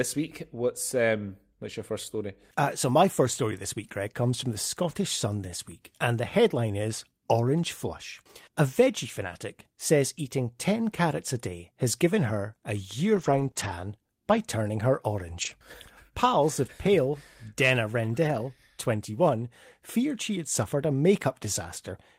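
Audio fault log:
3.83–3.85 s (just after "my first story this"), 9.23–9.29 s (just before "says eating"), 13.15–13.49 s, 13.55–13.69 s, 14.29–14.35 s (just before "turning her"), 15.41–15.51 s, 16.63–16.65 s, 18.23–18.37 s, lost packet rebuilt from error correction: each stretch, from 20 ms up to 180 ms at 13.15 s, was replaced by the reduced-bitrate duplicate carried in the following packet. Nothing drops out, but these frames sound grainier and hissier.
13.51–13.55 s, short concealed packet loss: about 20 ms arrived neither in time nor as a redundant copy, sitting between two error-corrected runs. The decoder bridged it by extending the preceding signal, repeating the pitch period for voiced sound or shaping noise for unvoiced, then crossfaded into the next frames. The result is a brief smear or warble in the speech, where a short consonant could be lost.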